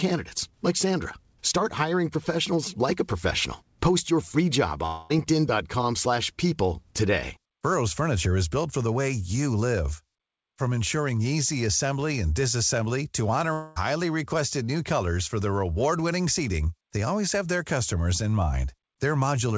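A likely long network dropout cuts the stream twice: from 4.86 to 5.12 s, after "your free job," and from 13.54 to 13.78 s, just before "requested new colors for." Each time the receiver fills the missing audio (about 0.24 s, then 0.22 s) by stretching the last sound into a fading buzz.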